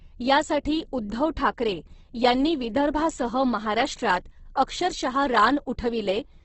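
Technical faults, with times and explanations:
Throughout: Opus compression. The speech is band-limited, with nothing above 8.1 kHz, and the codec damage is heavy: harmonics lose their clean tonal quality and turn rough, grainy and noise-like, while the spectrum stays filled rather than showing swirling holes. That texture is likely the Opus music (CELT) mode working at a very low rate, consistent with about 12 kbps, where band energies are kept but detail is replaced by folded or noise-filled content.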